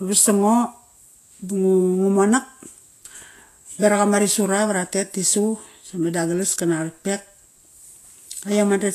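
Speech with plainly audible codec damage running throughout. The treble is hissy and grainy, consonant attacks are smeared, and there is no content above 14.2 kHz. The likely cause is Vorbis compression at a low quality setting. The encoder has lowered its cut-off and quantised the upper residue so coarsely that fine high-frequency detail is replaced by noise of similar energy. The degree of damage fits a bitrate of around 34 kbps.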